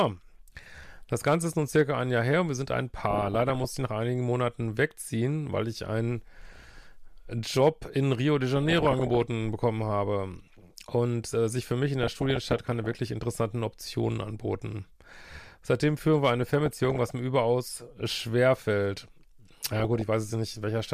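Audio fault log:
3.04–3.65 s (after "und wir sind ein"), 6.50–6.78, 8.56–9.22, 12.03–12.97, 16.47–17.01 and 19.65–20.02 s, DAB burbling: bit errors of roughly 0.7 to 1.5 percent get past error correction into the MP2 data, corrupting samples or scale factors and putting burbling noise blips or level jumps into single sub-bands.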